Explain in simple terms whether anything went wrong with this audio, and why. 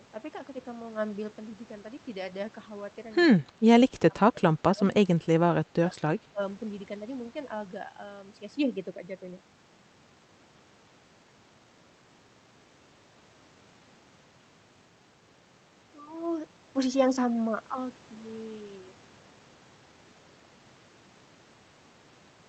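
Speech suppressed in double talk: the speech dips or drops out at 3.39–3.63, 3.88–4.14, 4.31–5.3, 5.64–6.01 and 6.17–6.4 s, likely because the echo canceller turned down both overlapping talkers.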